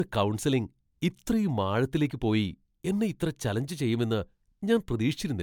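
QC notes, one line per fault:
Throughout, generation loss: the speech sounds swirly, smeared and hollow despite content reaching 20.1 kHz, and consonant onsets blur. This is likely from about three MP3 passes at a rate that fits 128 kbit/s, each re-quantising on a shifted frame grid so noise and spectral holes stack up.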